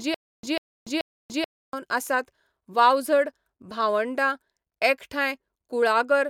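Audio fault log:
0.00–1.73 s, stutter with silent gaps: already under way at the start, the same 143 ms fragment of speech repeats three times, each followed by 290 ms of digital silence in an even 433 ms cycle. This is likely a stalled stream replaying its last fragment on each retry. A plain dropout would resume with new audio instead.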